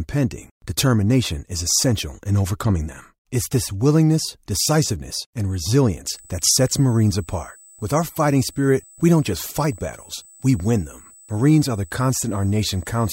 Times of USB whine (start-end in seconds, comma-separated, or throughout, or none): 6.08-13.12